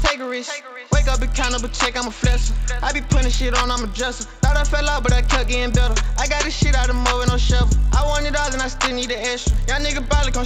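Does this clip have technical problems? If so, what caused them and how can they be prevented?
Yes. A faint 50 Hz buzz rides on the sound throughout and falls silent whenever the signal stops. This is a resampler restarted on every block: converting 16 kHz to 48 kHz in isolated 20 ms blocks leaves a small error at each block edge. Prevent it by carrying the converter's filter state across blocks so each edge sees its real neighbouring samples.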